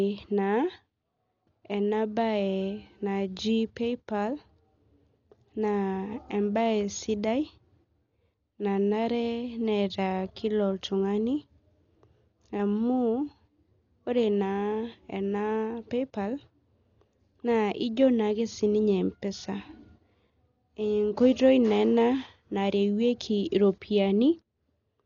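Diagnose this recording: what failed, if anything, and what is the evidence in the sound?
The codec stage failed: throughout the speech nothing sits above 7 kHz, so it sounds dull, and rough, fluttering noise clings to voiced tones. That points to likely Dolby Digital compression starved of bits, consistent with about 40 kbps, where unfunded frequency lines are filled with dither noise.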